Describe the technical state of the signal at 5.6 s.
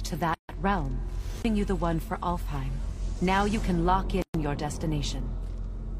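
At 5.6 s the signal is intact, with no audible technical fault at that point.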